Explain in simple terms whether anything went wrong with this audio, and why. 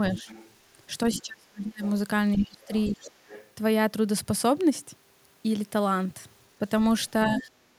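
A faint second voice shows up at 0.14–0.53, 1.13–1.22, 1.84–3.49 and 7.39–7.44 s. That's the other side's voice leaking through, likely because the echo canceller didn't fully remove the loudspeaker sound.

The main voice also dips or gets choppy at 0.17–0.29, 1.22–1.83, 2.36–3.01 and 7.26–7.49 s. That's speech suppressed in double talk, likely because the canceller turned everything down while both sides talked at once.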